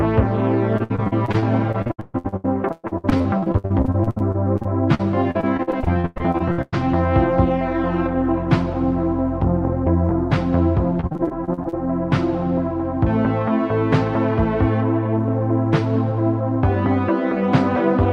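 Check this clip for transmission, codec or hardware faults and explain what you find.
Repeated packet loss (robotic sound) occurs twice, from 0.77 to 6.74 s and from 11.00 to 11.74 s. Lost packets are patched by extending the preceding audio, about a third of each stretch, with gaps up to 135 ms. This sounds choppy, with pieces missing. A spectrogram shows smeared, frozen horizontal bands with abrupt edges.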